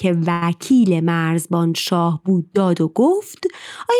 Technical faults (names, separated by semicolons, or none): short stall from a late packet